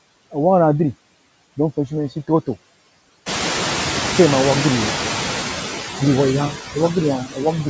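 Noise suppressor artifacts run through the whole speech clip. The suppressor pulls down whatever bands it takes for steady noise, about 10 dB, frame by frame, so the background dips between phrases and comes back up under the speech.

From 3.26 s to 5.32 s you hear the noise suppressor catching up. The room noise jumps by about 16 dB around three and a half seconds, and the suppressor's noise estimate lags, so the louder background leaks through with only about 5 dB of reduction. It settles down over roughly two seconds as the estimate adapts.

Between 7.2 s and 7.4 s, speech gets cut by the noise suppressor. It mistakes a soft stretch of the speech for background and turns it down by up to about 15 dB for a bit over a tenth of a second, so that bit sounds swallowed and faint.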